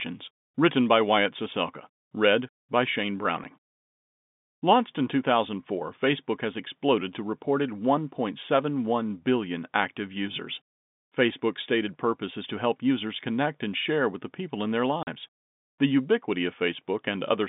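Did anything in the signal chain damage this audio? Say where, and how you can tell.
Yes, network packet loss filled with silence. Silent holes occur at 3.44 s and from 15.03 to 15.07 s after "the people in their", fitting 10 ms packets.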